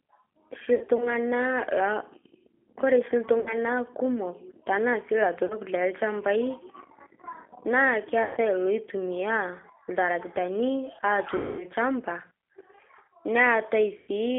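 The whole clip of speech passes through the G.729 codec at 8 kbit/s. The band is held to a telephone line, 300 Hz to 3.4 kHz. The voice is rebuilt from a filter, a pitch predictor and a few pulses. It sounds plainly rough and synthetic.

VoIP packet loss concealed by the speech codec occurs six times: 0.75 to 1.09 s, 3.40 to 3.54 s, 5.46 to 5.57 s, 8.23 to 8.39 s, 11.37 to 11.64 s, and 13.98 to 14.11 s. The first gap is scattered, with runs of up to 60 ms. The longest, near 11.4 s, loses 220 ms. The decoder stretches its last sound into a buzzy tone or coloured noise that fades. The voice stays weak briefly after each gap.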